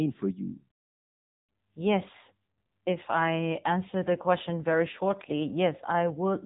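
AMR narrowband mobile codec damage runs throughout the speech. The signal was squeezed through an 8 kHz telephone path with nothing above 3.8 kHz, and its low-bit vocal-tract model leaves the voice plainly buzzy and synthetic, which points to the 7.95 kbps mode.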